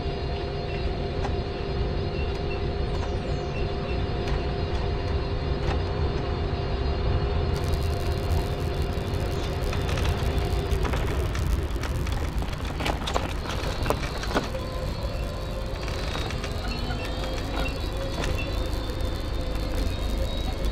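From 7.53 s to the end, a block size mismatch (padded) zero-fills each short block's tail, adding a 91.5 Hz buzz and slowing playback to 0.996 speed.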